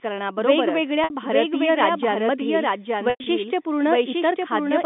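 A doubled audio track runs throughout, likely from a second, slower capture path: a dry, full-band copy trails about a second behind, roughly 5 dB quieter. At 1.04 s, packet loss with pitch repetition covers a 60 ms gap just before "भारतीय राज्यांमधील", so the receiver holds the last pitch period and gives a brief buzzy sustain. At 3.10 to 3.26 s, after "भारतीय राज्यांमधील", 120 ms are lost across 160 ms with a longest run of 100 ms, so the repeated pitch fades toward silence before a cross-fade back.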